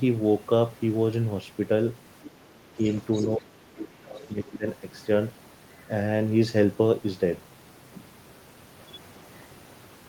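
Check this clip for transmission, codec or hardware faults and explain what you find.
Two echo-related faults turn up between about 2.2 and 4.7 s, both pointing to a speakerphone-style setup.

Other side's voice leaking through at 2.24–2.30, 2.87–2.96, 3.14–3.27 and 4.21–4.28 s: short scraps of a second voice, roughly 10 to 30 dB under the speech, likely echo the canceller missed.

Speech suppressed in double talk at 2.37–2.84 and 3.37–4.65 s: the speech dips by up to about 25 dB, likely because the canceller ducked everything while both sides talked.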